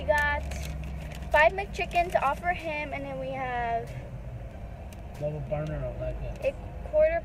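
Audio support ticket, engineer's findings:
No audible faults found in the signal on review; no dropouts, level anomalies or processing artefacts identified that would point to a failing component.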